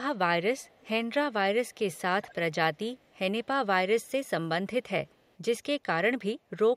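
Faint echo leak keeps popping up through this speech: at 0.59 to 0.89 s, 1.68 to 1.99 s, 2.22 to 2.35 s, 2.99 to 3.15 s, 4.02 to 4.11 s and 5.07 to 5.35 s. Each time a ghostly copy of the voice trails about 200 ms behind. It's mostly very quiet, around 35 to 40 dB down, though the 2.22 s scrap jumps up to about 20 dB below. This is likely a far-end speakerphone whose echo canceller isn't fully catching its own loudspeaker.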